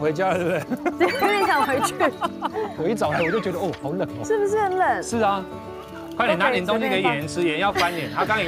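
No technical faults can be heard anywhere in this clip.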